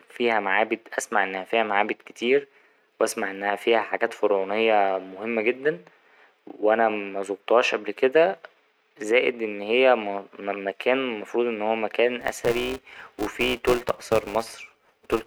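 From 12.21 s, after "المفروض إن هو مكان", a filter restarted on every block adds a 345 Hz buzz. Each block, which fits 128 samples, starts from silence and ticks.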